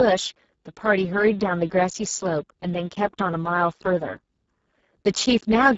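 Right from the start and all the way through, the speech carries heavy Speex codec damage: hoarse, noisy and edging toward robotic, which points to a very low bitrate, around 6 kbps. The excitation is starved of bits, and nothing reaches above 7.7 kHz.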